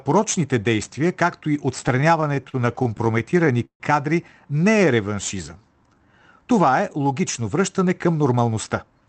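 Speech played through a WebRTC-style call path whose top end stops near 8 kHz, consistent with Opus at a moderate bitrate. From 1.81 to 3.83 s there are repeated stalls (stutter): the jitter buffer kept running dry, and the receiver bridged about 19 short gaps by extending the last sound, some 364 ms in total and up to 149 ms at once, so the speech drags and hitches without losing content. From 4.71 to 6.20 s a jitter buffer slow-down stretches the audio to about 87% speed by repeating pitch periods, adding 199 ms. Pitch stays put while sounds are drawn out to rebuild the buffer's reserve. From 7.99 to 9.01 s a jitter buffer speed-up does the reverse, trimming around 150 ms of pitch periods to run at about 112% speed as the receiver sheds excess delay, which makes that stretch sound hurried at unchanged pitch.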